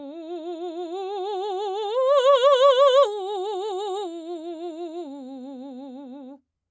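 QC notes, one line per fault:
No faults to log here; the music just carries the usual call microphone processing, which trims the deepest bass and leaves nothing above 8 kHz, and that's all normal.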